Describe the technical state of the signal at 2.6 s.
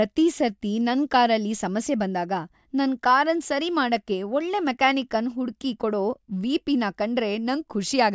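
At 2.6 s the speech signal is intact, with no dropout, clipping, glitch or other fault at that point.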